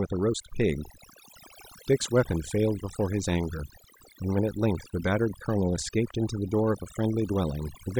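Overdone noise removal runs throughout: bands near the noise estimate are cut too hard, leaving twinkling specks in near-silence and cutting quiet parts of the voice along with them.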